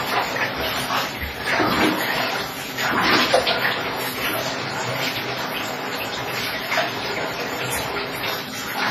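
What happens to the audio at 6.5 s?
At 6.5 s, as throughout the clip, the damage points to likely WMA compression at a low bitrate near 24 kbps: long transform blocks spread quantisation noise over tens of milliseconds, so the sound rings and washes with breathing hiss, and nothing survives above 15.3 kHz.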